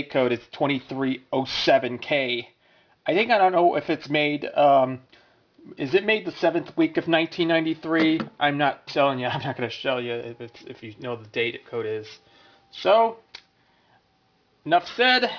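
Aliasing runs through the whole clip, from start to end at about 15 s. High-frequency content that should have been filtered away has folded back below a ceiling near 5.5 kHz, which points to the audio being resampled down to around 11 kHz without an anti-aliasing filter. Those folded components land at unrelated frequencies, roughly 20 dB under the main signal, giving sibilant and bright sounds a gritty, metallic edge, and the spectrum stays dense right up to that band edge.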